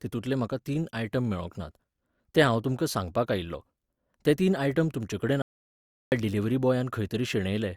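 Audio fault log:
5.42–6.12 s, audio dropout to silence: right after "ते तीन आयटम तुमचेकडेन" the speech cuts off mid-flow into dead digital silence for 0.7 s, likely a lost input while writing continued. Unlike a noise gate or fade, no room tone or decay remains.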